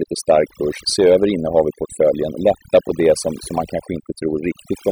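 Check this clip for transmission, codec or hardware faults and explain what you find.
One fault runs through the whole speech clip: overdone noise removal. Noise reduction set too strong cuts bands near its noise estimate, so the background drops and breaks up into twinkling specks.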